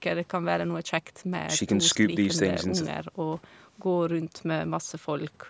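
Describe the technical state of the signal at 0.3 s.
At 0.3 s the speech signal is intact, with nothing wrong to be heard at that moment beyond the normal band limit of call microphone processing, which leaves no content above 8 kHz.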